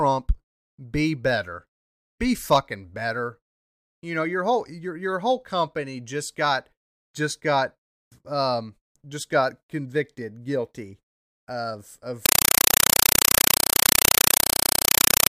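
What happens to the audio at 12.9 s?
Compressed stream played as audio runs from 12.26 s to the end of the clip, right after "got convicted guilty of". Undecoded AC-3 data is played as samples, giving 5.33 ms noise bursts separated by silence 31.25 times a second: very loud, chattering static.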